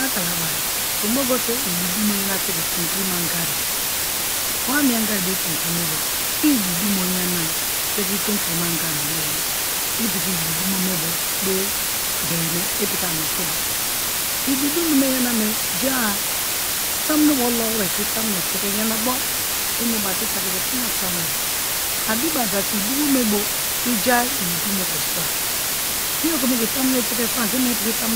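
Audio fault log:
throughout: low bit depth with dither. The speech is quantised to only 3 bits, with dither added before rounding, so the error becomes a constant, even white hiss rather than distortion. The hiss sits about 5 dB above the speech level.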